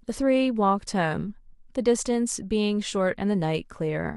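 No technical faults can be heard anywhere in this speech recording. Nothing in the audio calls for a timestamp or a closer look.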